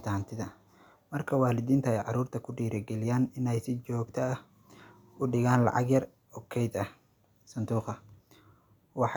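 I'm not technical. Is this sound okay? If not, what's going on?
Yes, there's nothing wrong here that needs fixing, so you can relax about this one.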